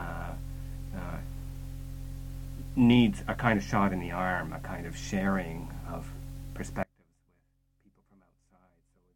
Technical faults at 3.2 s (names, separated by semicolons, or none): none